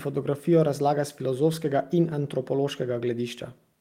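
No technical faults can be heard anywhere in this recording. The speech continues without any audible break, dropout or distortion.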